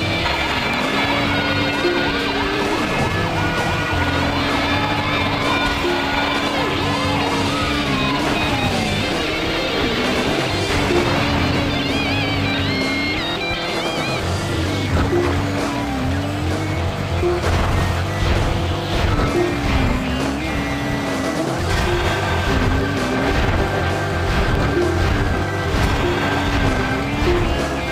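A regular click or pop runs through the audio from 0.14 s to 27.78 s, landing every 0.6 s, around fifty in all. These are clock drift buffer slips, most likely caused by two devices running on separate clocks that disagree by roughly 700 ppm. The buffer between them creeps toward full or empty until a block of about fifteen samples is dropped or repeated, and each such jump in the waveform is heard as a tick.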